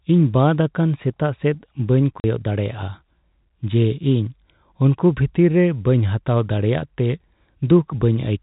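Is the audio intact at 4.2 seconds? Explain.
Yes, the speech at 4.2 seconds is intact, with no dropout, click or other fault at that point.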